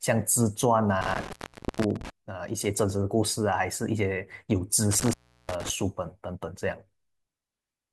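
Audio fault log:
1.02–2.10 s and 4.91–5.70 s, intermittent contact: the speech cuts out for 0.46 s and then 0.34 s, with crackle at each edge, as a loose plug or cable momentarily breaks the signal path.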